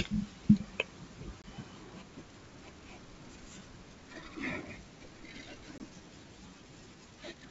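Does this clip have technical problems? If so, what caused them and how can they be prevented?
Yes, there's packet loss on an ADPCM call, hitting twice: around 1.42 to 1.49 s and again at 5.78 to 5.81 s. Each time about 20 ms of speech drops out as a hard-edged silent hole, which fits a single lost packet. Because ADPCM sends differences rather than whole samples, the decoder's predictor and step size drift out of step with the sender's during the gap. So the speech comes back with a brief level or distortion glitch before settling. The wideband G.722 coding around it stays clear up to about 7 kHz. To prevent it, add a jitter buffer with proper packet loss concealment, plus FEC or redundancy on lossy links.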